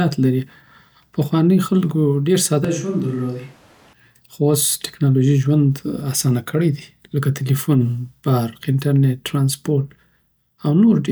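From 2.65 to 3.93 s the close microphone's feed likely dropped out, leaving the recording on a switch to a distant microphone placed further from the talker. Because that microphone hears more of the room than the mouth, the speech turns suddenly roomy and hollow, loses its low-end body and falls about 5 dB in level, while background noise rises to sit roughly 30 dB under the speech. The close sound returns just as abruptly at 3.93 s.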